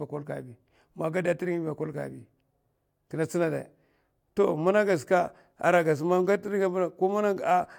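No technical faults are audible anywhere in this recording.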